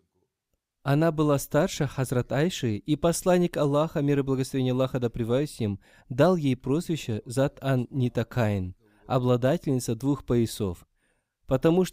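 Nothing goes wrong anywhere in this bit of speech; there's simply no technical fault to point to from one end to the other.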